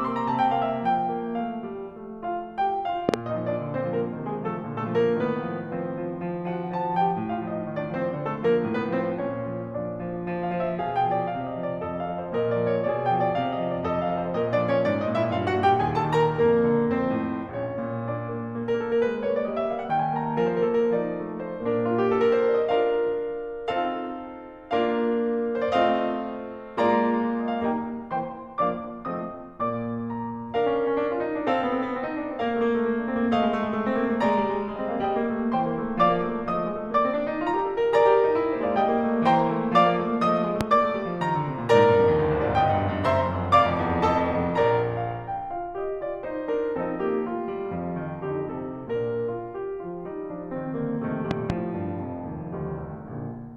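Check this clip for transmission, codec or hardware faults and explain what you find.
Three loud pops break into the music. A double pop sounds at 3.09 to 3.16 s, a single one at 40.61 to 40.63 s, and another double at 51.31 to 51.52 s. Each is a sharp thump, up to around 20 dB above the music, which carries on underneath. A likely cause is a voltage pulse from a switch, plug, static or driver glitch.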